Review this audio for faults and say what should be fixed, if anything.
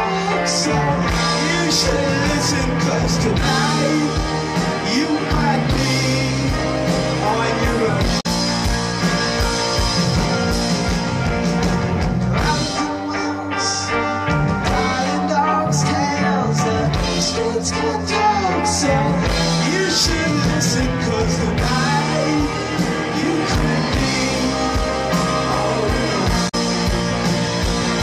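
There are two short bursts of damaged data in a compressed stream, at 8.17 to 8.26 s and 26.45 to 26.55 s, each about 0.1 s long. Corrupted bytes make the decoder misread those frames and lose sync until it finds a valid frame header, giving a brief glitch. On a spectrogram each shows as a blocky, broadband patch out of character with its surroundings, and the waveform shows a sudden jagged discontinuity. Re-fetch or re-encode from an intact source and verify stream checksums during transfer.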